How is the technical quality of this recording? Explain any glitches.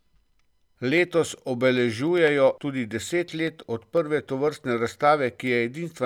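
The recording is marred by one recurring fault: periodic USB or driver dropouts. From 0.08 s to 5.97 s, roughly every 0.1 s (about ten times per second), a sliver of audio well under a millisecond long is skipped outright. A background task stalls the USB bus or audio driver on a fixed schedule, so the samples are lost and the waveform jumps. Each jump makes an evenly spaced tick, audible only while speech is present.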